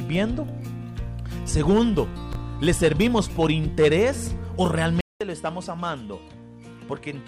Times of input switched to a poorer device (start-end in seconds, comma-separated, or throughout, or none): 5.01-7.27